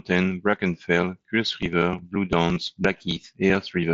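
Concealed Bluetooth headset packet loss at 0.51–0.53 s and again at 2.54–2.56 s: about 22.5 ms of headset-to-phone packets vanished, which fits three lost frames. The receiver filled each gap by repeating a recent stretch of waveform, producing a brief buzzy hold through the light grain of the mSBC link.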